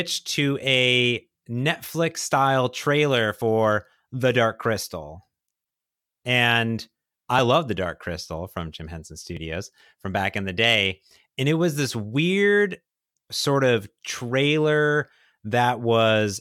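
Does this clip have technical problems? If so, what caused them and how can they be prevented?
Yes. There are three short discontinuities from overlap between stream segments, at 3.42 s, 7.39 s and 9.37 s. Each is a small click or skip in the speech. The player found two adjoining segments whose time stamps claimed the same stretch of audio and trimmed the supposed duplicate. That material was never actually repeated, so real audio was lost: about 11 ms at 3.42 s and about 6 ms at the other two. The waveform jumps across each gap. The 2 s spacing of the last two events fits 2-second segments. To prevent this, make the packager write segment time stamps that meet exactly, with no overlap, and have the player trim only audio that has been verified as duplicate.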